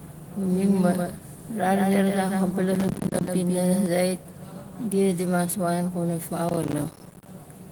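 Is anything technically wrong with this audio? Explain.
Yes. From the start until 3.86 s, the speech has a dry, flat echo about 150 ms behind it, roughly 5 dB quieter, and it cuts off abruptly. This is likely a doubled audio track from a second, slower capture path. From 2.75 to 3.28 s, and again from 6.49 to 7.27 s just after "wan kuna", gritty crackle tears through the speech. This is processor overload crackle: many deadlines for buffers of about 10 ms are missed in a row, and each miss leaves a hard-edged silent gap. The Opus voice coding does only light damage.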